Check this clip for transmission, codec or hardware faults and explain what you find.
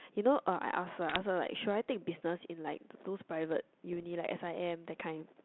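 There are two short bursts of bit errors on an ADPCM link, heard through speech carried by G.726 at 32 kbit/s with its usual 200 Hz to 3.5 kHz band. The first runs from 1.09 to 1.19 s, the second from 3.92 to 4.05 s, with an error rate somewhere around a few tenths of a percent. Each flipped bit throws off the decoder's step size and prediction, so the error rings on for milliseconds and produces pops and rough, gritty bursts with brief level jumps. On a waveform these show as spiky, uneven amplitude. On a spectrogram they appear as vertical broadband smears reaching the top of the band.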